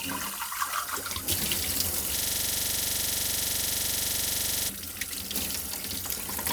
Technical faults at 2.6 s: system hang loop

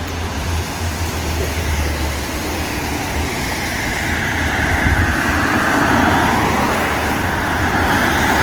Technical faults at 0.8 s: Opus compression

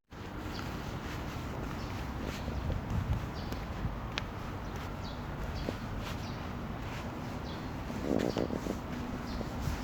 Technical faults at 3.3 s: none

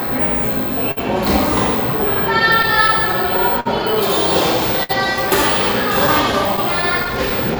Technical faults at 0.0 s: clock drift between sender and receiver

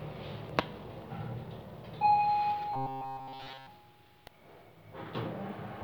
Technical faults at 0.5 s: damaged data in a compressed stream

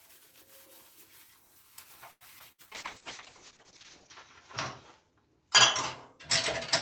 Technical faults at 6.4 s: call bitrate drop

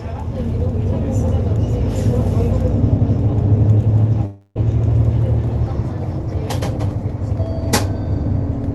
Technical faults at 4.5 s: long network dropout

